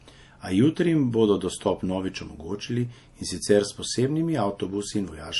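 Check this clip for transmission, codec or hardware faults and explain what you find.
The clip has one fault, present from start to finish: MP3 compression artefacts, clearly audible across the whole speech clip. The treble stops abruptly, with nothing above 11.5 kHz, which points to an encoder short of bits, consistent with a low bitrate around 48 kbps. The likely cause is MP3 encoding. Under that bit budget the encoder drops the top band and zeroes weak spectral lines that flicker between frames, leaving a watery, swirling texture, chirpy s sounds and smeared onsets.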